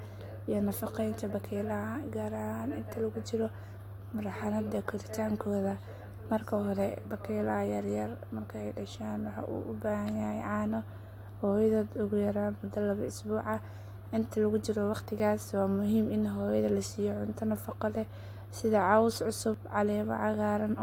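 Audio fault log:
15.2 s and 19.54 s: dropped buffer (overrun). Just after "lagu jiro", then again later, the audio jumps ahead, skipping roughly 10 ms and then about 30 ms. The likely cause is samples overwritten before they were read, which splices the two sides together with no gap.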